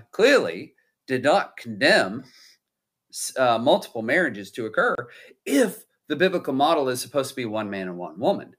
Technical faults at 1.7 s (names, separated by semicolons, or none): none